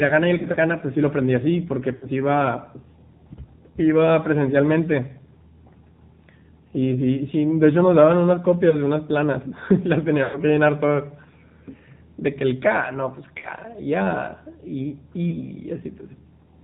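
Speech that sounds thin, boxy and clearly buzzy throughout, with nothing above 4 kHz and a plainly synthetic edge to the voice. This is the AMR narrowband mobile codec: the audio was squeezed into 8 kHz sampling and rebuilt from a vocal-tract model driven by sparse pulses. The degree of buzz points to one of the lower AMR-NB modes, around 7.4 kbps. On top of that are brief dips, warbles and smeared stretches at 0.38–0.58 s, 1.96–2.06 s, 8.70–8.77 s, 10.24–10.38 s, 13.38–13.47 s and 15.30–15.38 s. These are lost AMR speech frames. Where a frame failed to arrive intact, the decoder repeated its last good pitch and spectral settings at reduced gain. The first event sounds like isolated 20 ms losses scattered across about 160 ms. The 10.24 s stretch is the longest, at about 100 ms, and fits a run of roughly five frames.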